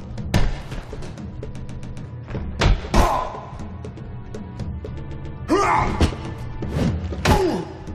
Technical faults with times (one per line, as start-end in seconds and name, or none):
1.59-2.01 repeated frames
4.85 dropped samples
5.07-5.35 repeated frames